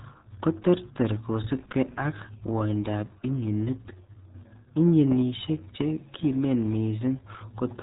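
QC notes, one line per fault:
Throughout: RealAudio 14.4 codec. The speech is muffled and gargly, with nothing above 3.8 kHz, and heavy codec damage smears consonants into a bubbling, watery texture. This points to RealAudio 1 at 8 kbit/s, a dial-up-era coder that models speech through a narrow channel and discards detail it cannot fit. Unlike a simple low-pass filter or telephone band-limit, the gargle and smearing come from coarse coding, not just missing treble.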